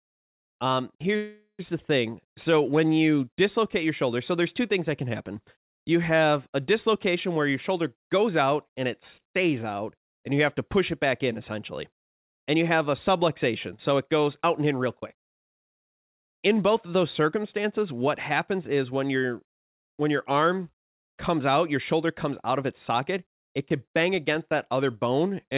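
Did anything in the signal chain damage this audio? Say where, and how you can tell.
Yes, two problems, both at the call-processing and network stage, on a call path whose band stops at 4 kHz, which fits narrowband G.711. First, a call audio freeze from 1.16 to 1.62 s, just before "the thing". The last sound smears into a fading buzz and then a short silence of about 50 ms before the speech resumes. This is likely packets stalling in transit, with the jitter buffer draining and the receiver stretching what it had. About 0.43 s was filled in, nothing was lost, and everything afterwards plays that much later.

Then there are three stretches of jitter buffer speed-up, where the speech runs faster while the pitch stays put. They run from 13.74 to 15.77 s at about 5% fast, from 17.36 to 18.59 s at about 6% between "both of those" and "is when your when", and from 21.76 to 23.15 s at about 4% between "your arm comes out" and "it could bang against". 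That's the buffer working off a backlog by cutting many tiny pitch-period slices, roughly a tenth of a second in each of the first two bursts and about half that in the last.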